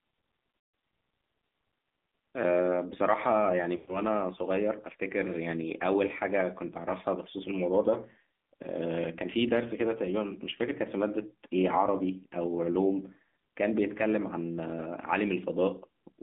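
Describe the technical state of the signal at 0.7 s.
At 0.7 s the signal sits inside a burst of lost AMR speech frames running from 0.58 to 0.74 s, about 160 ms, which fits eight consecutive 20 ms frames. The decoder fills the gap by repeating the last good pitch and vocal-tract settings with shrinking gain, so the sound smears into a drawn-out buzz that fades toward silence. On a waveform the envelope decays steadily through the span; a spectrogram shows frozen harmonics thinning out.

The whole clip also carries AMR narrowband mobile codec damage, plainly audible here. The band is confined to roughly 200 Hz to 3.6 kHz, and the thin, buzzy, synthetic texture points to a low mode around 7.4 kbps, where a few pulses per subframe drive a vocal-tract model. A spectrogram shows a hard ceiling near 3.6 kHz with empty space above and smeared, coarse harmonic detail below.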